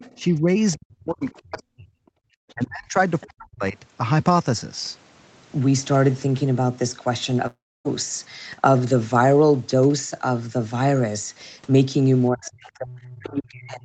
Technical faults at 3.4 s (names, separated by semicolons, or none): speech suppressed in double talk